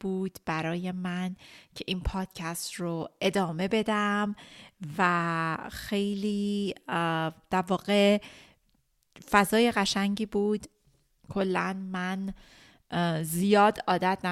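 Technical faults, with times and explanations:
2.25–3.75 s, resampler restarted on every block: ticks land every 250 ms, a steady 4 Hz, pointing to a 44.1 to 48 kHz conversion run block by block without carrying samples across edges. Unlike dropout clicks, they are evenly spaced and present only with signal.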